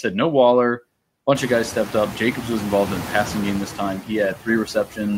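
A speech recording with noise suppressor artifacts throughout. The suppressor pulls the steady background down by about 18 dB between phrases, then lets it back up under the speech. The effect is most audible once the room noise swells by about 24 dB around 1.5 s. There is also speech cut by the noise suppressor from 4.66 to 4.99 s. The processor mistakes quiet parts of the speech for noise and turns them down with the background. The deepest drop is about 10 dB, over about 150 ms in all, so soft sounds there come out swallowed and faint.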